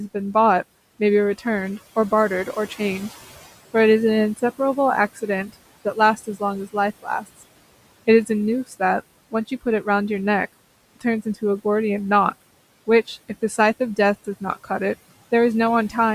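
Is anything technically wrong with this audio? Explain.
Yes. Between 14.25 and 14.7 s, parts of the speech sound swallowed, as if the ends of sounds briefly sink into the background, dropping by up to about 10 dB, for around a tenth of a second in total. This is speech cut by the noise suppressor. It mistook those quieter stretches of speech for noise and turned them down along with the room noise, which sits about 22 dB below the speech, so they come out faint and clipped short.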